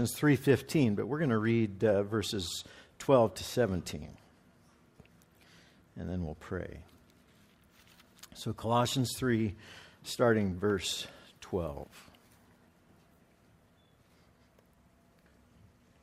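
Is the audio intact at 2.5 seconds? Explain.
No. At 2.5 s the audio is affected by clock drift between sender and receiver. The sender's clock runs about 2% slower than the receiver's. The jitter buffer keeps draining, so the receiver must stretch the stream to avoid running dry. The result is small recurring timing hiccups at uneven intervals.

This shows up as repeated timing corrections from 0.20 s to 15.30 s. The receiver repeats short pieces, always in the same direction, so playback runs at 98% speed. Around 0.4 s is added in total. Each edit is slight, heard, if at all, as a brief hitch or an unsteady tempo.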